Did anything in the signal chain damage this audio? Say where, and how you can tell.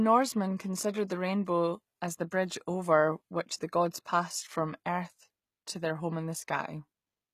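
Yes: HE-AAC compression damage runs through the whole speech clip, at the codec stage. The treble sounds synthetic, with s sounds turning gritty and lispy, as happens when upper bands are rebuilt from copied lower ones. This is likely a very low bitrate, which fits about 20 kbps.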